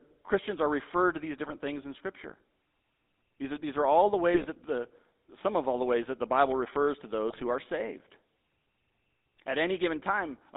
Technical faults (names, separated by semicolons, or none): GSM full-rate codec; GSM bit errors